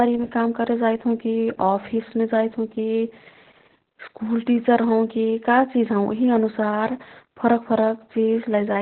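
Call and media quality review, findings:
Opus voice compression, throughout: speech muffled, hoarse, faintly robotic, nothing above 4.3 kHz. Probable SILK narrowband mode with coarsely coded excitation, consistent with about 8 kbps.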